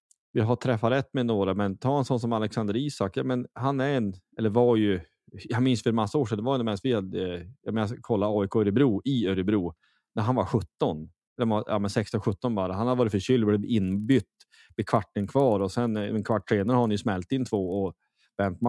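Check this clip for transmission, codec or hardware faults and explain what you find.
One fault turns up near the end. From 13.84 s to 18.68 s, right after "har varit förkyld blev", a 25 Hz buzz of ticks rides on the speech: a resampler restarted on every block. Each 40 ms block went from 48 kHz to 24 kHz separately, leaving an error at every edge.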